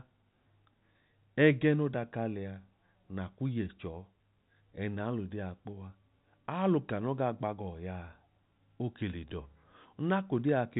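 No technical faults can be heard in this speech, which comes through the usual G.711 telephone coding with its band ending at about 4 kHz.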